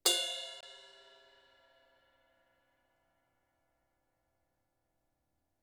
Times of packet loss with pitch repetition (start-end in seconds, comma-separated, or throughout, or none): none